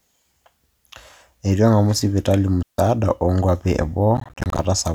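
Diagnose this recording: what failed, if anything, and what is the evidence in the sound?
Digital wireless dropout at the receiving link: after "eng'amu sipitali", 2.62 to 2.78 s falls to near silence for 160 ms, with a quick fade and no noise burst. That separates it from an analogue radio dropout.

Processor overload crackle at the driver or buffer stage: from 4.17 to 4.65 s, after "o nkuapi", around twenty tiny hard-edged silent gaps, each about 10 ms long, make gritty crackling. Unlike clipping, it consists of gaps rather than flattened peaks.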